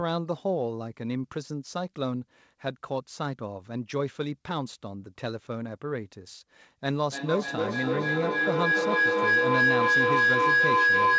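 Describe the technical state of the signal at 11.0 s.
Feedback howl, from 6.99 s to the end: a microphone-to-loudspeaker loop gains level each pass, building a roughly 1.5 kHz howl over a loop delay of about 300 ms, about 7 dB above the speech.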